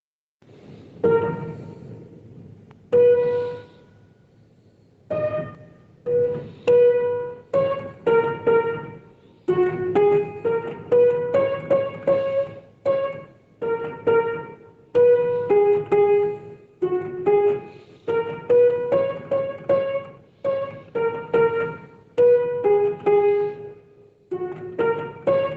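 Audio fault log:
Throughout, gain pumping: the level ducks by around 10 dB beneath each loud sound. Loud and soft passages sit unnaturally close in level and the result sounds squashed. The likely cause is input gain set far too high, with a fast limiter or compressor clamping down on each peak. The call-path band limit, nothing above 8 kHz, sounds normal.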